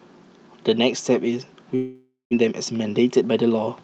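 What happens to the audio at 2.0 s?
At 2.0 s the audio is inside a break that began near 1.75 s: the sound turns into a buzzy smear of whatever came just before, which fades out, and for about 140 ms nothing is heard at all before the audio picks up again near 2.35 s with a jump. This is a long network dropout, likely from a gap in arriving packets between 1.75 and 2.35 s. The receiver papered over it with about 575 ms of synthesized fill, roughly 400 ms of the original never played, and playback resumed about 150 ms later than before.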